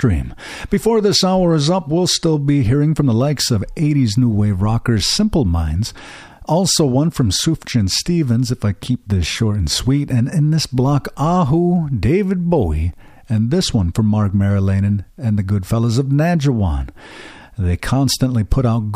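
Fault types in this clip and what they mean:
CD scratch ticks, 12.64 to 13.37 s: six short ticks interrupt the speech in under a second, a rate of about eight per second, each lasting no more than about a millisecond. A blemish on the disc surface corrupts more data than error correction can restore, once per revolution, so the player patches or silences the damaged samples each time that spot passes the laser, leaving this evenly spaced clicking.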